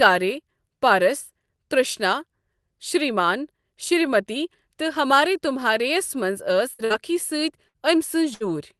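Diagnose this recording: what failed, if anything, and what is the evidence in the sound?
The network dropped runs of packets four times, a burst of packet loss, and the receiver's concealment had to fill each hole. At 6.73 to 6.82 s, 6.85 to 6.93 s, 7.68 to 7.77 s and 8.34 to 8.43 s, the speech freezes into a held buzz or fading hiss for roughly 50 to 60 ms. It then resumes about 60 ms further on, so that stretch of speech is missing. The surrounding Opus coding, band-limited near 12 kHz, fits a call link.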